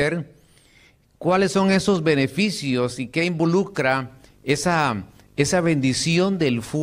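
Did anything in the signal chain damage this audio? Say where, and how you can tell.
Yes. Video or display buzz enters at 3.70 s, just after "esos beneficios y qué", and runs to the end. The analogue wiring is picking up a nearby screen or video cable. A 50 Hz field-rate buzz with hash above it and a 15.6 kHz line tone sit roughly 30 dB below the speech.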